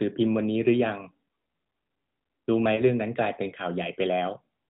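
At 2.76 to 2.81 s the speech gives a brief dip or warble, the mark of lost AMR speech frames. The length fits one 20 ms frame that failed its checksum, so the decoder repeated the last good pitch and vocal tract settings at lowered gain. This sits within narrowband mobile audio that stops at 4 kHz.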